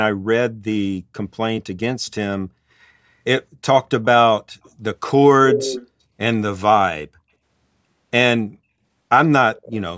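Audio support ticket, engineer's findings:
Echo leak: a delayed second copy of the speech at 5.51–5.87 s, 236 ms behind and nearly as loud as the direct sound. It recurs at 9.55–9.81 s, 245 ms behind and far quieter. Likely one side's loudspeaker pickup that its echo canceller didn't fully remove, sent back down the call.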